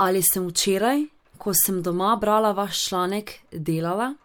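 Speech recording, with no technical faults to report. Nothing in it calls for a time or a cause.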